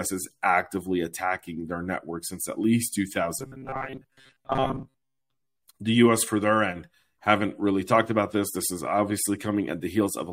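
From 3.39 to 5.56 s, just after "network since at least", the speech turns robotic. A rigid metallic buzz near 133 Hz runs through the speech. This is likely robotic sound from repeated short buffers, each about 7.5 ms, filling most of that stretch.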